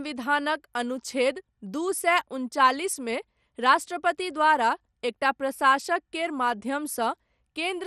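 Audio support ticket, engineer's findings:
MP2 compression, throughout the speech. Dull top end with nothing above 14.1 kHz, and a plainly audible gurgling, granular texture. Likely an MPEG Layer II encode short of bits, fitting a 64 kbps stream: upper sub-bands switched off, remaining bands coarsely quantised.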